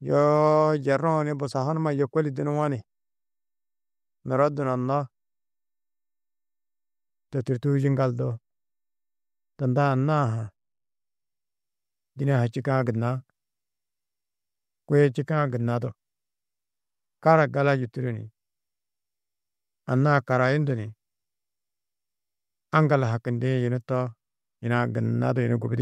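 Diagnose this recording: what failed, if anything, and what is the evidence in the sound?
Nothing here failed: I listened through the whole speech recording and heard no fault at any stage, so there's nothing to trace back.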